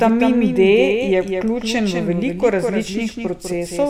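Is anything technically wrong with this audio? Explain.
Yes. Throughout, the speech is shadowed by a full-band copy about 5 dB quieter arriving about a fifth of a second late, with no room decay: a doubled audio track, likely from a second, slower capture path.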